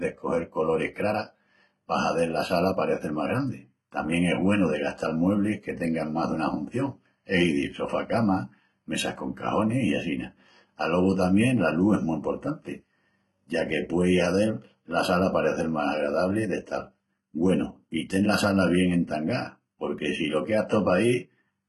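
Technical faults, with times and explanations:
Throughout, HE-AAC compression: the speech has replicated, metallic treble stopping near 11.8 kHz, with gritty sibilants from heavy coding at what sounds like 16 kbps, likely spectral band replication rather than plain lowpassing.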